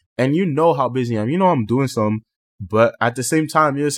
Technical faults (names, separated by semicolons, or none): none